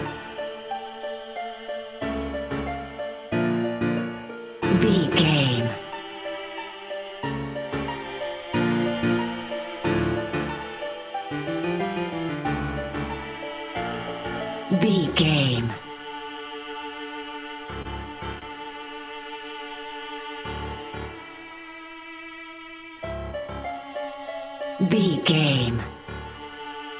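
At 17.82 s and again at 18.39 s, a short stall from a late packet holds the sound for about 28 ms. The jitter buffer ran dry and the last sound was stretched until the packet arrived. On a waveform, each shows as a repeated, slightly dipping cycle. Nothing drops out. The spectrogram shows everything cut off above 4 kHz, which fits a G.711 call path.

From 19.24 s to 20.43 s, a jitter buffer slow-down repeats pitch periods to add about 92 ms, so the sound plays at 93% speed with unchanged pitch. The spectrogram shows harmonics smeared longer in time but not shifted in frequency.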